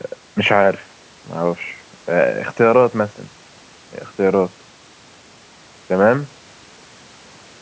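No technical faults can be heard in this speech recording, which carries the normal signature of a call's microphone processing: the lowest bass is trimmed by its high-pass filter and nothing sits above 8 kHz.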